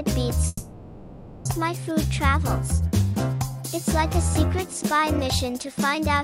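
From 0.47 to 1.47 s the sound is replaced by a fading buzz or hiss carried on from the last moment, lasting 0.98 s, then 10 ms of silence. This is likely a long network dropout: the lost second is skipped rather than delayed, and it runs far longer than a brief glitch.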